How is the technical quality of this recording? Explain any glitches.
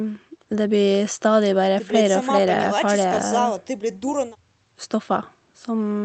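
The technical quality holds up, and there are no glitches in this recording to explain.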